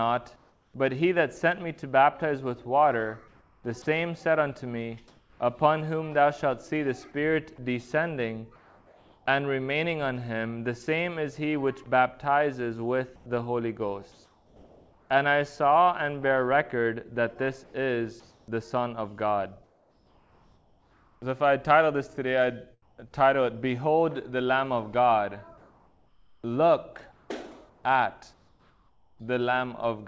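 This clip comes through a call path with nothing above 8 kHz, which fits G.722 at 64 kbps. Several times the background turns into a flat, featureless hiss that is likely comfort noise in place of the background, filling the pauses while the sender's voice detector stopped transmitting. That happens at 0.36–0.74 s, 3.28–5.40 s, 8.56–9.26 s, 17.64–23.10 s and 25.58–29.20 s. The first fill matches the level of the real background, which sits about 39 dB below the loud parts. At 8.56 s the fill runs about 2 dB quieter. At 3.82–3.86 s a sliver of sound drops out to that same steady noise, likely sound dropped by the voice detector after it mistook that bit for background. From 11.84 to 15.10 s the audio goes choppy, with two or more holes totalling about 1.1 s. That's likely sound chopped by the voice detector switching transmission on and off repeatedly.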